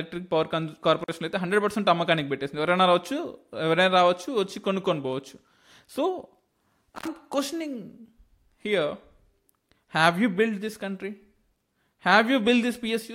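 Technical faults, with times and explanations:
1.01 to 1.09 s and 6.96 to 7.08 s, intermittent contact: the speech drops out twice, for about 45 ms and then about 68 ms, with a crackle at each edge and only faint hiss left during the gap. A loose plug or cable briefly lost its connection, breaking the signal path. The scraping of the contact as it parted and remade produced the crackles, and the hiss is the small noise still reaching the input while the line was open.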